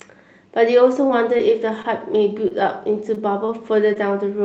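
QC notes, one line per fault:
1.07–1.11 s, 1.37–1.51 s, 1.82–1.86 s, 3.14–3.18 s, 3.46–3.50 s, 3.94–3.97 s: short concealed packet loss. About 20 ms of audio never arrived each time. The decoder extended the preceding sound for roughly 14 to 21 ms and blended back, leaving brief smears or wobbles, with short consonants at risk of vanishing.
2.48–2.52 s: short stall from a late packet. A packet arrived about 25 ms late and the jitter buffer ran dry. The receiver held the last sound until it came, then resumed where it left off. Nothing is lost, but one sound drags slightly with a slight buzz or dip.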